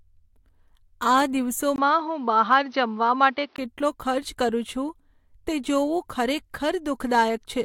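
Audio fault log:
1.76–3.58 s, input switched to a poorer device: the recording likely jumped to a lesser microphone or a headset's call mode for this stretch, then returned. That device passes nothing above 6.1 kHz, so the speech turns dull and boxy while loudness stays about the same. A brief gap of about 20 ms marks the switch, and a faint new background noise sits well beneath the speech until the clearer sound resumes.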